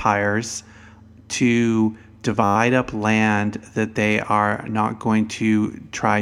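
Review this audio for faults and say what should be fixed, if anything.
A system hang loop occurs in the speech from 2.44 to 2.56 s. The driver stalled while the audio hardware kept replaying the same 10 ms stretch of its ring buffer, twelve times over, so a steady 100 Hz buzz replaces the speech. Unlike an underrun dropout or crackle, the repeats are identical and evenly spaced, producing a pitched tone rather than silence or random clicks. Little or no speech appears to be lost. To prevent it, stop the stall by keeping the audio thread at high priority and free of blocking work, and have the driver mute on a missed deadline rather than recycle the buffer.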